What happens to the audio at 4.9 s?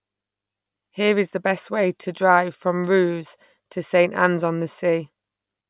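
Nothing goes wrong at 4.9 s: the speech carries on intact through that moment, with no audible fault.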